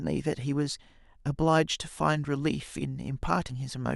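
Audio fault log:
3.49 s, compressed frames skipped: the speech lurches forward, as if a small sliver of sound had been snipped out. Whole compressed frames went unplayed, either missing from the stream or rejected by the decoder as damaged. The jump of roughly 40 ms fits about two 20 ms frames.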